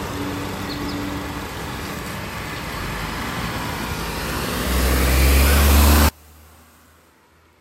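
One channel inverted from 6.09 s to the end: the sound collapses by about 32 dB, likely because reversed polarity on one side cancels the shared content when summed to mono.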